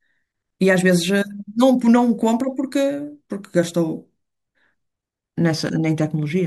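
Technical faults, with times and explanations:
0.86, 2.40, 3.63 and 5.54 s, bit error spike: four isolated sharp ticks, broadband and unrelated to the speech, peaking at about -19, -7, -13 and -13 dBFS. Each is a single sample knocked off by one flipped bit, jumping by a power of two and snapping straight back.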